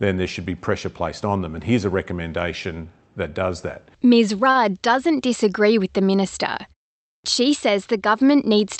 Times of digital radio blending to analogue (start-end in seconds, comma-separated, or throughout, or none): none